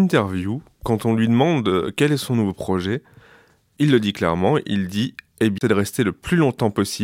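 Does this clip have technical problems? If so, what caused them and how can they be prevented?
Yes. A CD skip occurs at 5.58 to 5.61 s in this speech. A knock or a disc flaw threw the laser onto another turn of the spiral, so the player muted for about 30 ms and resumed from a different point. Cleaning the disc and isolating the player from vibration would prevent it.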